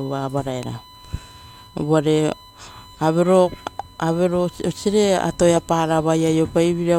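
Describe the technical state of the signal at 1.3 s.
At 1.3 s, USB whine sits under the speech, as it does for the whole clip. A steady 1 kHz tone rides along, roughly 30 dB below the speech. The bus's 1 ms current frames leak through power or ground, producing that fixed pitch.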